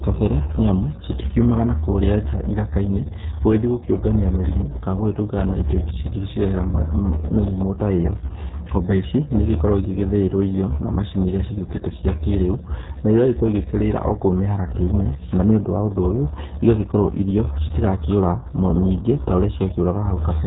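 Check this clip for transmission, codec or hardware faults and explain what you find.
There's one fault, and it runs through the whole clip: the RealAudio 14.4 codec, the old dial-up speech coder. The damage is heavy, consistent with an 8 kbit/s stream. The coder rebuilds the speech from a small set of parameters and discards the fine spectral detail. Nothing gets through above about 3.8 kHz, so the speech sounds muffled and boxy, with that gargly, watery texture running over everything.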